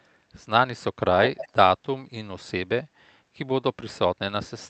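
Speech clip with an echo leak from 1.23 to 1.49 s: a delayed copy of the voice, trailing by about 370 ms and only a few decibels quieter, comes back briefly, likely because the far end's echo canceller let loudspeaker pickup through its microphone. The band limit near 8 kHz points to the Opus call codec.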